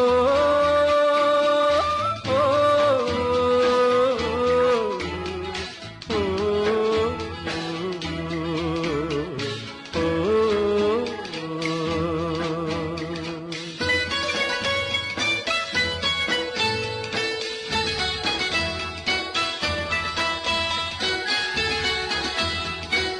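Nothing here needs flagging, as there isn't a single technical fault to point to anywhere in the audio.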